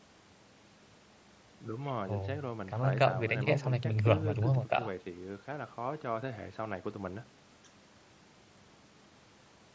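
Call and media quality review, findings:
Nothing stood out on listening to this speech clip; the band tops out around 8 kHz, which fits the call microphone processing and the Bluetooth mSBC headset codec path it went through.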